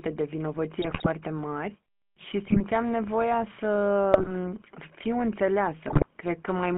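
From the start the whole speech clip carries the GSM full-rate codec sound: that buzzy, gravelly roughness you get when the vocal tract is modelled and fed a coarse pulse train instead of the real excitation. It's clearly audible, and the band sits in the phone range of 200 Hz to 3.4 kHz, with nothing up top. The bitrate sounds like the old 13 kbps full-rate coder.

Then there are four bursts of GSM bit errors, from 0.82 to 1.07 s, 2.46 to 2.62 s, 4.12 to 4.32 s and 5.88 to 6.06 s. Each lasts roughly 0.16 to 0.25 s, and the damage fits a few percent of bits being flipped. When the corrupted filter, pitch and gain values hit the decoder, the spectrum bends and the level jumps frame by frame, so the speech breaks into squawks, pops and gargling.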